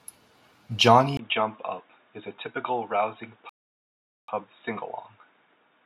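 Input switched to a poorer device at 1.17 s: after a brief gap of about 20 ms, the speech turns duller and boxier and stays that way to the end. The level drops by roughly 5 dB, and a new, faint background noise appears, roughly 45 dB below the speech. The likely cause is the system changing its input in mid-recording to a narrower-band microphone or a headset's call profile.

A playback stall runs from 3.49 s to 4.28 s, cutting the speech off in mid-flow for about 0.79 s of silence before it resumes. This is likely the player running out of buffered data, or its audio thread being blocked, so that the output had nothing to play until it recovered. Because the gap is nearly 0.8 s, it reads as a dropout rather than a natural pause.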